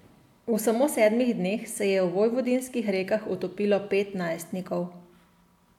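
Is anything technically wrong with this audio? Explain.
No, nothing technically wrong stood out on listening to this speech clip.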